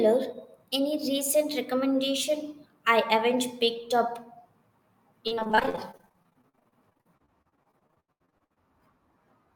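From 5.27 s to 8.58 s, the stream suffers repeated packet loss (robotic sound). Audio data goes missing or arrives too late dozens of times in quick succession, with gaps of up to 80 ms. The receiver patches each hole by stretching the preceding sound, covering about a third of the stretch this way. The speech turns choppy, with fragments dropping out entirely.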